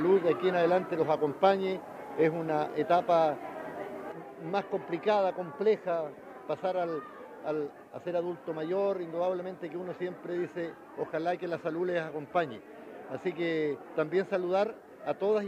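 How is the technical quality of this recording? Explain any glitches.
The recording has one clear fault. From 4.12 s to the end, the sound drops abruptly in level by about 6 dB and stays there. The likely cause is one channel dropping out. When one side of a stereo signal goes silent, everything shared by both sides loses half its contribution once the channels are summed to mono. Anything present only on the lost side vanishes entirely. The result is a sudden, lasting step down in loudness.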